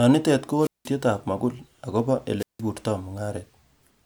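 At 0.58 to 0.91 s, just before "mogul agobo", and again at 2.38 to 2.61 s, right after "mogul agobo", the speech shows a wireless microphone squelch dropout. The radio signal fades, hiss rises, and the receiver mutes for about 183 ms and 168 ms respectively.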